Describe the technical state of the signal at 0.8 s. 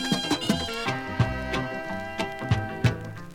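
At 0.8 s the sound is hurried and pitched sharply upward, close to ten semitones high, because it sits inside a section at the wrong speed running from 0.0 to 0.86 s at 1.75 times normal rate, likely from playback against a mismatched clock.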